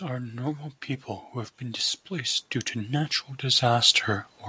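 From 1.32 s to 4.05 s the automatic gain control, judging the input too quiet, keeps raising its gain, by about 8 dB in all. The speech and the background swell together over that stretch, while the band stops near 8 kHz, which fits a G.722 call path.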